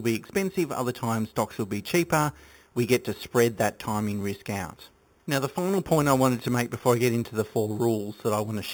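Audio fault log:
Throughout, imaging from sample-and-hold upsampling: samples were repeated without smoothing, likely 8 kHz raised to 48 kHz, so mirrored speech fizzes metallically at 4 to 8 kHz, about -16 dB.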